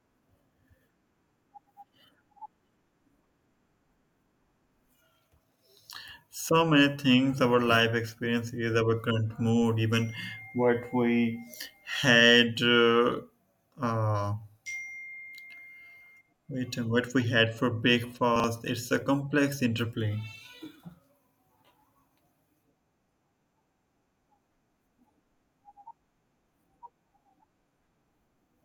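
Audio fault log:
18.36–18.44 s, chunks out of order: a 40 ms chunk plays one chunk late, so two slices of speech swap, giving a brief jumble with three hard joins.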